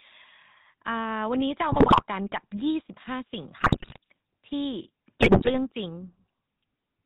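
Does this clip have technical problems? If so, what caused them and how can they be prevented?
Yes. The GSM full-rate codec colours the whole clip: the voice has a buzzy, gravelly roughness and nothing above 4 kHz. That fits the 13 kbps full-rate coder, which models the vocal tract and excites it with sparse, regularly spaced pulses. To prevent it, use a wideband or modern codec such as AMR-WB or EVS instead of GSM full rate.

GSM bit errors break up the speech at 1.72 to 2.02 s, 3.60 to 3.98 s and 5.21 to 5.57 s with squawks, pops and gargling. Corrupted filter, pitch and gain values warp the spectrum and make the level jump frame after frame while each burst lasts. To prevent it, improve the radio link's signal quality, or use stronger channel coding with bad-frame detection so that damaged frames are concealed rather than decoded.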